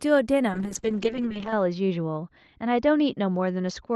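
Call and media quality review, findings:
Call bitrate drop, 0.48 s to end. Top narrows from 12 kHz to 8 kHz, rough and muffled. Fits Opus falling from 32 to 10 kbps; lowest for 1.05 s.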